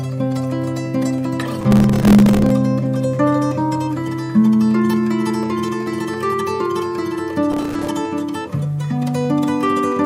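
Two bursts of processor overload crackle tear through the audio, from 1.61 to 2.50 s and again from 7.52 to 7.89 s. The machine kept missing deadlines on very short buffers, a few milliseconds each, leaving dozens of tiny silent gaps that add up to gritty crackling.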